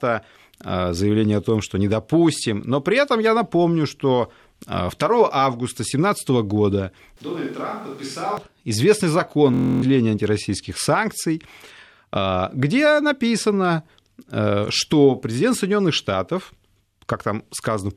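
A speech recording with two separate faults. From 7.17 to 8.37 s the sound turns roomy and hollow and loses bass, and the level falls by around 10 dB while room noise rises to roughly 25 dB below the speech. The likely cause is a switch to a distant microphone, with the close microphone's signal dropping out and a farther pickup standing in. Both the change to the distant sound and the return are abrupt. From 9.54 to 9.82 s comes a system hang loop: a single 23.22 ms slice of audio repeats exactly 12 times, which fits a 1024-sample ring buffer being replayed while the computer or driver was frozen. A loop that short is heard as a steady buzz at 43.1 Hz rather than a stutter, and around a third of a second of real audio is missing at that point.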